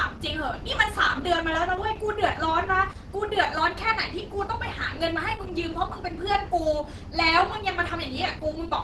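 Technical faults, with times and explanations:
throughout, Opus compression: the speech sounds plainly muffled and hoarse, with nothing above 12.1 kHz, likely from Opus hybrid mode at a rate fitting 16 kbps.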